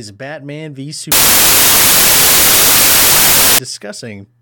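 From 1.12 s to 3.59 s, the speech is replaced by loud, harsh broadband noise. These are samples built from the wrong bytes, with the low bits read as the high.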